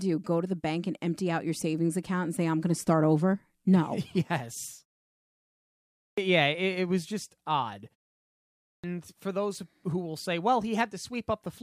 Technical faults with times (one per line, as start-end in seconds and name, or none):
5.96-6.18 clipped start after a pause
8.62-8.84 clipped start after a pause